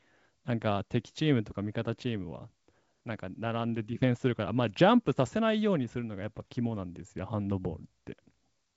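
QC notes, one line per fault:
No faults heard in this speech clip. The audio comes through G.722 wideband telephone coding at 64 kbit/s, with nothing above about 7.7 kHz and any coding hiss faint at most.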